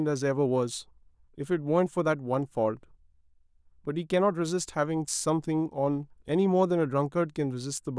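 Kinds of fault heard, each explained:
No fault can be heard in this speech recording. Nothing in the sound points to a technical problem of any kind.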